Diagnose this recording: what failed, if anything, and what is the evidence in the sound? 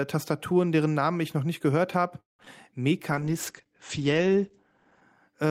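At 2.20 to 2.40 s the speech halts: a brief fading tail, then about 160 ms of silence, before resuming where it left off. This is a call audio freeze at the network stage, likely packets stalling until the jitter buffer drained. It added roughly 185 ms of delay without losing content, unlike packet loss.

Just after, short concealed packet loss occurs at 2.43 s and again from 2.45 to 2.47 s. Each is a brief smear where the decoder extrapolated the preceding sound over a hundredth or two of a second of missing audio. Here speech is replaced rather than paused.

From 3.11 to 5.09 s the speech turns coarse and muffled. This is a call bitrate drop in the codec: the encoder fell from 48 kbps to 13 kbps and the bandwidth narrowed from 20 kHz to 8 kHz. Unlike the dropouts, nothing is interrupted. The tone just degrades for about two seconds.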